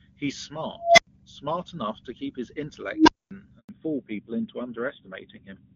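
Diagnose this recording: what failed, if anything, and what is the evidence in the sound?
The call-processing stage has an unstable filter. At 0.77–1.07 s a tone around 700 Hz swells over about 205 ms to clipping, then cuts to about 93 ms of silence. At 2.92–3.31 s a lower tone near 300 Hz builds in about 157 ms, followed by about 232 ms of silence. Bad recursive coefficients drive the output until it overflows and resets.

A handover gap at the network stage runs from 3.59 to 3.69 s. The speech fades quickly and leaves 100 ms of silence. No frames arrived while the call switched between networks, so the audio in that interval is lost.

A fallback to narrowband at the codec stage begins at 3.69 s, right after the gap, and lasts to the end. The clear 23.85 kbit/s AMR-WB (HD Voice) sound drops to AMR-NB at 7.4 kbit/s. Nothing remains above 4 kHz, so the speech turns duller and rougher.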